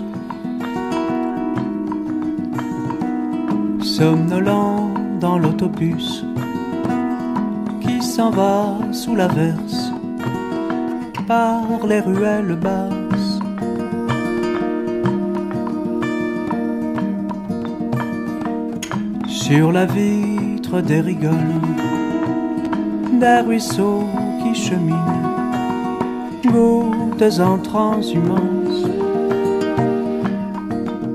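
A worn or dirty contact in a connector briefly lost and regained its grip at 22.65 s, producing loose connector crackle. For an instant the signal path opened and closed rapidly, chopping the audio into fragments and letting any DC sitting on the line jump abruptly. That intermittent contact is heard as a short, irregular scratch of crackle cutting through the sound, over almost as soon as it starts.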